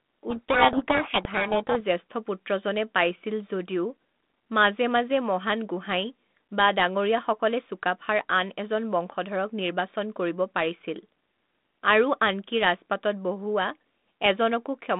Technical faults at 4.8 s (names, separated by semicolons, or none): none